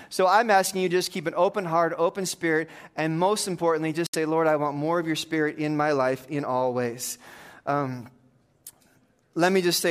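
A Bluetooth dropout hits this speech recording from 4.07 to 4.16 s, just after "spirit and most importantly". The sound falls abruptly silent, then resumes as though it had played on. Packets likely arrived too late and were discarded, a gap that fits about three lost frames.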